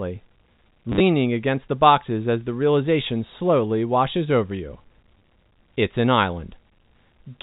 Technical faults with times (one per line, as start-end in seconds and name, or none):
0.92-1.00 packet loss with last packet repeated
5.19 packet loss with last packet repeated